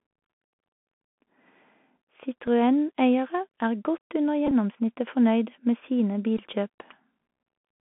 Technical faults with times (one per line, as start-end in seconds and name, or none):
0.00-7.80 Bluetooth CVSD headset codec
2.47 Bluetooth headset packet repeated
4.47-4.52 Bluetooth headset packet repeated
6.38 Bluetooth headset packet repeated